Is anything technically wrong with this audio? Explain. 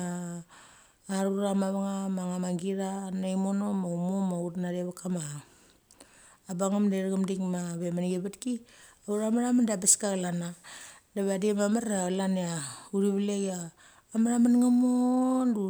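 No, nothing technically wrong can be heard in this speech recording. It carries no audible fault from beginning to end.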